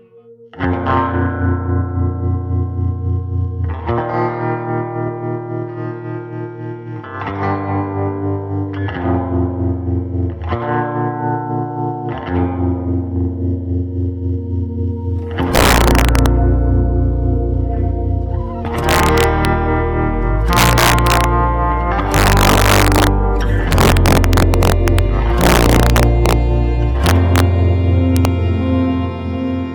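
From 15.55 to 16.26 s you get the first stretch of integer overflow, and it comes back at 18.89–19.45, 20.53–21.24 and 22.14–23.07 s. Somewhere in the chain a gain or sum ran past the biggest value the integer could hold and wrapped around to the opposite sign instead of being clamped. The push over the limit is only about 1 to 4 dB here, but each time a peak crosses the ceiling the waveform flips across the whole range. That gives a crack on the loud moments that's sharper than ordinary clipping.

Right in between, at 23.55–23.58 s, there's damaged data in a compressed stream. A bit of the encoded stream was wrong at that spot, so the decoder misread or rejected those frames, lost sync and had to hunt for the next frame header. You hear it as a brief disruption, possibly with a small jump ahead in the audio.

After that the overflow carries on at 23.72–24.99, 25.41–26.33, 27.06–27.40 and 28.17–28.25 s. 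The last two only go about 1 dB over.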